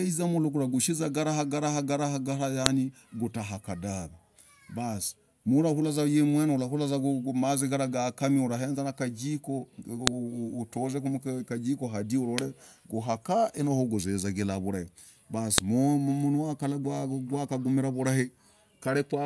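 At 2.66 s, 10.07 s and 15.58 s the speech gets a sharp, loud snap, a file header played as audio. The pieces were joined with their WAV headers left in, so those few dozen bytes play back as junk samples, clicking regardless of what the speech is doing.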